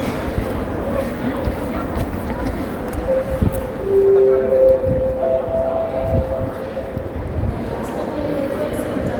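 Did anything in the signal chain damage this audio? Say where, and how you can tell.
No, nothing stood out on listening to these sounds that would point to damage at any stage of the signal chain.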